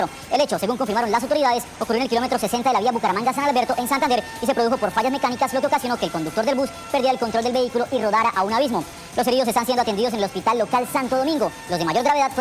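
Wrong sample rate, throughout the clip: the samples are played back faster than they were captured, with no conversion, so everything runs 1.45 times too fast and sits 6.45 semitones high. That ratio fits audio recorded at 22 kHz being played at 32 kHz.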